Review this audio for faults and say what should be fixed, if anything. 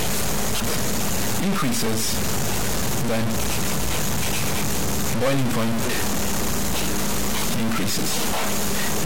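A distortion runs through the whole clip, and the quiet passages are filled with noise instead of falling silent. This is most likely a stuck bit: one bit of each sample held at a fixed value, so about half the samples are offset by that bit's weight, and small values near zero are pushed away from silence. On a waveform, the pauses show a fuzzy band hovering around zero. A spectrogram shows broadband hash smeared across the gaps and under the louder material. Prevention: check converter wiring and data lines with a bit-pattern test before recording.

From 0.59 to 0.62 s there is a brief glitch. This is damaged data in a compressed stream: around 30 ms of corrupted frames that the decoder misread before it regained sync on the next valid frame header. On a spectrogram it appears as a short burst of odd energy with a discontinuity on either side. On the waveform it shows as a spiky, malformed patch. 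Prevention: store and transfer the stream with checksums or error-correcting containers so corrupt frames are caught and replaced.

At 6.74 s the audio skips abruptly, losing roughly 10 ms and joining the two sides with no silence. The likely cause is audio missing between chunks, where a short slice is dropped as one processing block closes and the next opens. The spacing fits 4-second chunks. On the waveform there is a sudden step where the cycles fail to line up. A spectrogram shows a thin vertical seam. Prevention: use overlapping or double-buffered chunk handoffs so no samples fall between blocks.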